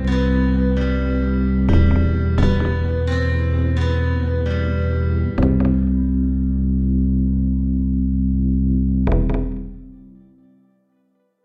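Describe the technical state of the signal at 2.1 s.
At 2.1 s one channel is running late by about 46 ms, which fits a 2048-sample buffer, and the two channels are then summed to mono. This channel delay (doubling) is present throughout the clip, not just at this moment. Because the lag is too long to blend, the late copy is heard separately at the same level as the original, so each sound here comes with a doubling or a single slap echo trailing just behind it.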